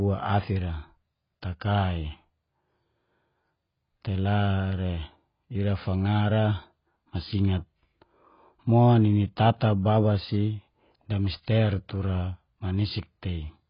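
AAC compression damage runs through the whole of this speech recording, from start to finish: nothing is present above 5.1 kHz, so the sound is dull and muffled, with a watery, smeared texture and a fizzy edge on sibilants. The cause is likely heavy AAC-LC encoding at a very low bitrate, around 16 kbps, where the encoder lowers its cut-off and quantises each frame's spectrum so coarsely that detail is lost.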